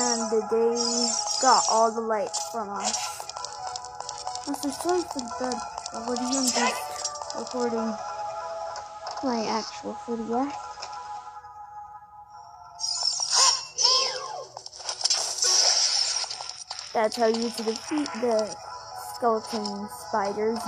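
A hybrid receiver lost digital reception, a digital radio blending to analogue FM from 7.36 to 11.44 s over 285 ms crossfades, adding hiss roughly 30 dB down and a level shift of about 1 dB.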